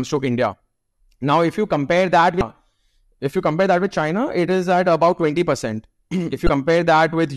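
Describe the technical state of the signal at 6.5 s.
At 6.5 s the speech hits damaged data in a compressed stream, running from 6.46 to 6.49 s, about 34 ms. Part of the encoded stream there is wrong. Bytes were lost, zeroed, overwritten or mixed with foreign data. The decoder misreads or rejects those frames, loses sync and hunts for the next valid frame header. The result is a brief disruption in the speech, heard as a chirp, squawk, click or short hole.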